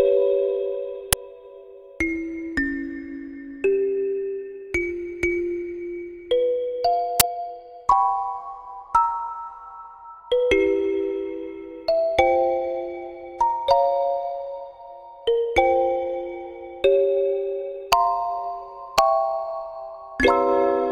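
At 1.13 s and again at 7.20 s, a brief burst of loud digital noise cuts in. Each is an uninitialised buffer: leftover memory played as samples. Their lengths suggest 256- and 512-sample blocks.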